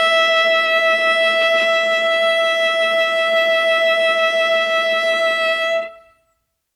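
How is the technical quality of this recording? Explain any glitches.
The music comes through with no audible technical faults: nothing in the signal path interrupts, distorts or alters the sound at any point.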